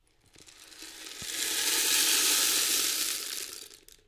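No technical faults can be heard anywhere in this audio.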